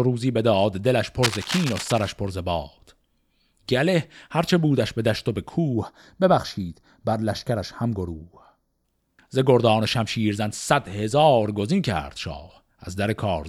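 Cable scratch noise runs from 1.23 to 2.10 s: dense, uneven crackling and rustling sits over the speech, roughly 10 dB below it. This is likely a worn cable, connector or control being moved, its contact resistance jumping rapidly as it shifts.

Channel delay (comb filtering) appears from 5.74 to 8.85 s. One channel lags the other by around 0.2 ms, and summing them to mono cancels shared content at regularly spaced frequencies, starting near 3 kHz, so the speech turns hollow and phasey.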